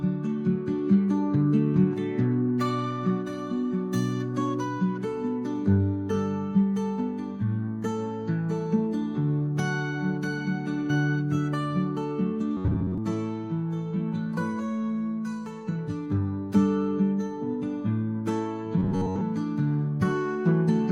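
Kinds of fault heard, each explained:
Robotic sound from repeated short buffers: twice the audio becomes a rigid metallic buzz near 94 Hz, likely from an 11 ms stretch replayed in place of most of the real audio.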